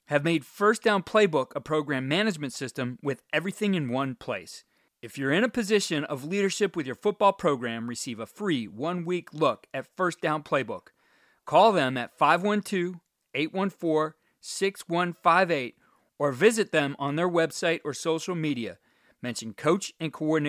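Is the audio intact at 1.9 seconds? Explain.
Yes, at 1.9 seconds the speech plays through cleanly, with no audible dropout, click, distortion or other fault at that moment.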